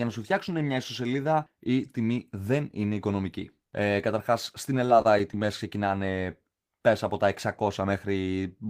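From 4.85 to 5.47 s, right after "καταρχάς στην", repeated packet loss (robotic sound): four short dropouts, longest 26 ms, patched by stretching the previous sound, so it goes choppy.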